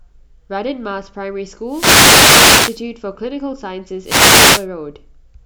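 Two wireless microphone noise hits break into the speech, from 1.66 to 2.83 s and from 4.04 to 4.67 s. Each time, the FM radio signal fades, and receiver static swishes up over the voice.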